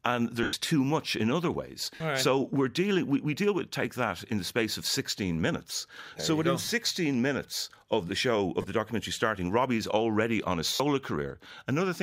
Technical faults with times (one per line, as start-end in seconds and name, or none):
0.43-0.53 lost LE Audio frames
1.95-2.00 lost LE Audio frames
6.65-6.68 lost LE Audio frames
8.62-8.64 lost LE Audio frames
10.74-10.80 lost LE Audio frames